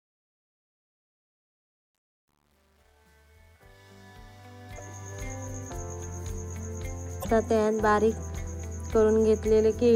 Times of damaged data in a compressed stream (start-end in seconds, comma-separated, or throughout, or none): 4.74-4.80, 7.20-7.25